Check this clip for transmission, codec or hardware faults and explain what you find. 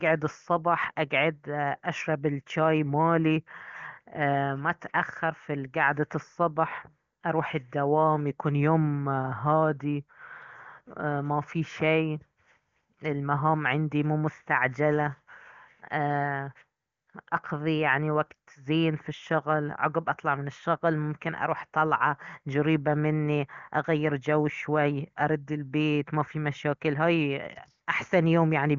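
No faults detected here.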